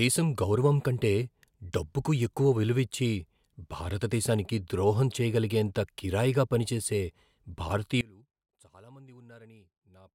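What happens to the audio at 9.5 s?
At 9.5 s the speech is in an audio dropout to a faint residue, which begins abruptly at 8.01 s and runs to the end of the clip. The signal was likely lost upstream while the path after the break stayed live, so only a faint leak remains, roughly 25 dB below the normal level. On a waveform the envelope collapses to a thin band at 8.01 s; a spectrogram shows the energy dropping to a dim trace.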